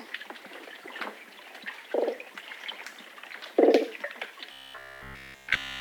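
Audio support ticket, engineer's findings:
Robotic sound from repeated short buffers, 4.52 s to end (5.81 s). Rigid metallic buzz at 66.7 Hz. Whole stretch repeated. Likely buffer underrun: playback loops the last 15 ms, matching the buzz, while real audio is skipped.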